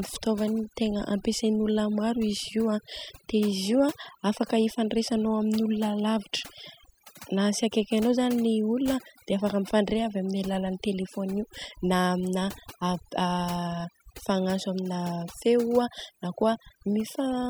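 Speech, and the whole thing has overdone noise removal: the denoiser was pushed so hard that bands near its noise estimate get switched off, dragging quiet bits of the voice along. Background drops and breaks up into twinkly specks.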